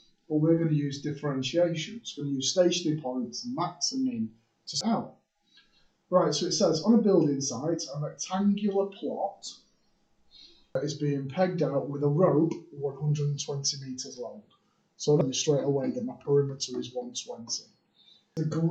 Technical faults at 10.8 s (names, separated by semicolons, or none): damaged data in a compressed stream